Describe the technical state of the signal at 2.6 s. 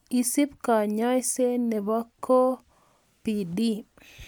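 At 2.6 s the speech signal is intact, with no audible technical fault at that moment.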